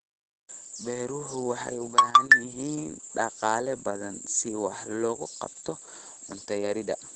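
Opus voice compression runs through the whole speech clip. Nothing is heard above about 8.7 kHz, which points to the codec's wideband SILK mode, where the speech is modelled by linear prediction with a coarsely coded excitation. The damage is plainly audible: the speech sounds muffled, hoarse and faintly robotic, consistent with a low bitrate around 12 kbps in 20 ms frames.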